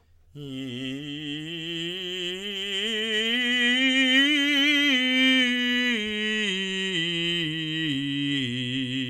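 There are no technical faults to describe in time order in this music.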